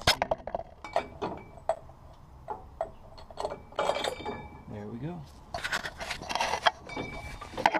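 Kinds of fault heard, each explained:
Gap between chunks: the audio plays in 2.0-second pieces with a 13 ms silence at each join, at 1.75, 3.77 and 5.78 s. Unlike a dropout, no sound is lost. It resumes exactly where it stopped, just slightly delayed.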